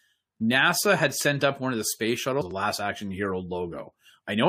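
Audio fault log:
2.40–2.42 s, stream segment skipped: the speech jumps abruptly forward with a blip at the join, as if a stretch of the programme is gone. The likely cause is a segment of the stream that failed to load, after which the player carried on with the next one.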